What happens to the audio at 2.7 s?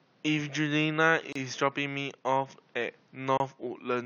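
Nothing goes wrong at 2.7 s: the speech carries on intact, with only the room's own background noise, about 35 dB below the speech, sitting underneath it as part of the recording.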